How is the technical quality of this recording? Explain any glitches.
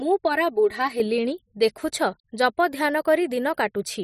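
The speech has one fault, a channel delay causing comb filtering, from 0.0 s to 1.0 s. One channel arrives about 3 ms behind the other, and the two are then folded to mono. Sound common to both channels cancels at evenly spaced frequencies. The first notch falls at around 200 Hz, with more notches spaced up the spectrum. A 3 ms offset gives fixed notches, so this first second sounds hollow and phasey.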